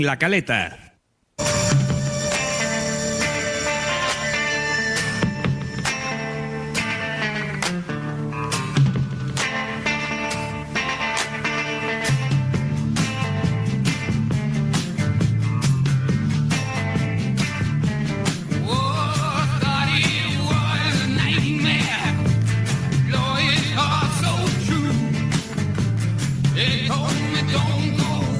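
Nothing stood out as a technical fault on listening.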